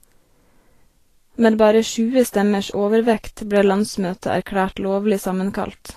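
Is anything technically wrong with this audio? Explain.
Yes. Two faults are audible.

Throughout the speech there is a hissy, grainy texture, and nothing is heard above 14.2 kHz. This is likely Vorbis compression at a low setting, which fits a rate near 34 kbps. Treble detail is quantised so coarsely that it turns into noise of similar energy.

From 2.70 to 2.74 s there is pre-echo. A short hiss about 40 ms long comes just before a sharp onset. The codec spreads its noise across the whole block, so the quiet moment before the attack fills with it and the onset sounds smeared.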